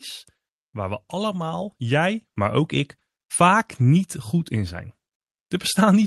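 From 0.72 to 2.78 s, speech and background swell together by about 8 dB: automatic gain rising after the control judged the input too quiet.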